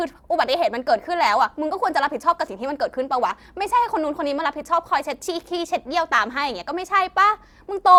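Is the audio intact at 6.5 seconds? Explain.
Yes, the speech at 6.5 seconds plays through intact, with no dropout, click, distortion or other fault at that moment.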